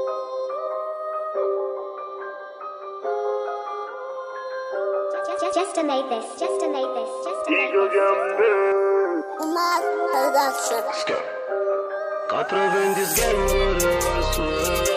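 From 8.72 s to 9.72 s the sound turns hollow and phasey, with the upper range thinned out as if heard through a tube. That second is channel delay (comb filtering): one channel arrives a fraction of a millisecond behind the other, and when the two are summed to mono, content common to both cancels at evenly spaced frequencies. The first notch sits around 3 kHz, with further notches evenly spaced above it.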